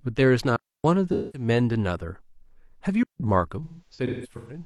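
Digital wireless dropout at 0.56 to 0.84 s: the speech stops dead for about 281 ms. The wireless link lost too much data, so the receiver muted with a very fast fade, leaving a clean hole of near silence with no noise burst on either side.

AAC frame loss with concealment at 1.13 to 1.48 s: about 213 ms of the signal went missing, which fits a run of five lost frames. The decoder rebuilt the gap from the last good spectrum, so the speech turns smeared and phasey instead of falling silent.

A second digital wireless dropout follows at 3.03 to 3.20 s, a 170 ms mute with the same abrupt, clean edges and no surrounding noise.

AAC frame loss with concealment returns from 3.64 s to the end of the clip at 4.66 s. This time the losses are scattered rather than contiguous, totalling about 512 ms across roughly 853 ms, which points to around twelve lost frames. The longest unbroken run is around 150 ms. 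The result is a stretch of intermittent smearing and noisy, hollow patches as the concealment repeatedly steps in.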